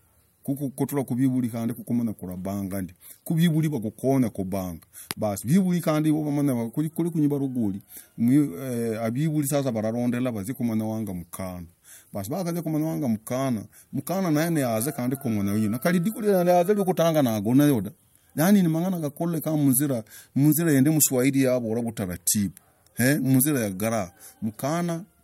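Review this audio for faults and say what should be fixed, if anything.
Clock slip clicks run through the whole clip, from 0.18 s to 25.21 s. They are faint, regular ticks, about ten per second, so hundreds in total. They are clearest on loud, sustained speech and vanish in pauses. Each slip is a single sample dropped or repeated. The likely cause is two devices running on separate clocks, drifting apart by roughly 300 ppm. Lock both devices to one word clock, or resample with a proper asynchronous sample-rate converter.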